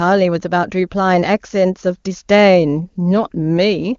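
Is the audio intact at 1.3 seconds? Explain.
Yes, the speech at 1.3 seconds is intact, carried cleanly through the AMR wideband (HD Voice) codec at 23.85 kbit/s with no fault at that moment.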